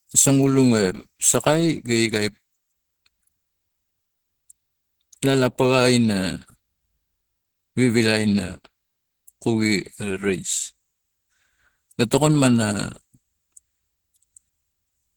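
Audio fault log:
throughout: Opus compression, likely the cause of the plainly audible hoarse, muffled, grainy quality of the speech. It fits roughly 16 kbps in the hybrid speech mode, where upper bands are filled approximately rather than coded in detail, though content still reaches 20.3 kHz.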